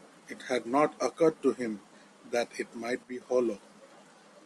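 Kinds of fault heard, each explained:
One channel drops out: From 3.03 to 3.21 s, the speech suddenly falls by about 6 dB. It stays down for roughly 0.18 s, then snaps back to full level. The step is abrupt at both edges, with no fade. The likely cause is one side of a stereo pair going silent. Summed to mono, sound shared by both sides then halves in level. Anything carried only on that side vanishes for the gap.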